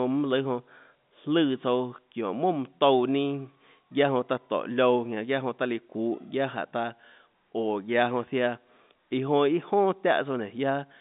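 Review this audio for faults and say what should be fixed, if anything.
Nothing here needs fixing: the speech sits in a telephone band of about 150 Hz to 3.7 kHz with nothing above 3.8 kHz, which is simply what G.711 telephone coding passes, and the signal is in sound technical order.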